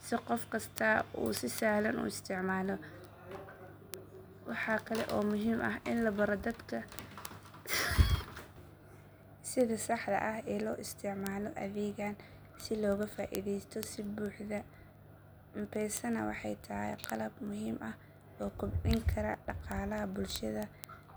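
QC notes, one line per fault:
0.14–21.16 s, word clock ticks: sharp clicks about every 50 ms as the unlocked clocks slip by a few hundred ppm, dropping or repeating one sample each time.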